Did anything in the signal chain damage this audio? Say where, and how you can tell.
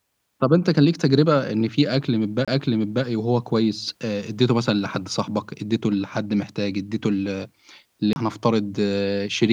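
Yes, at playback: a CD skip at 2.45 s and 8.13 s. Each gives a brief mute of about 30 ms, then speech jumps as the laser lands on another track turn.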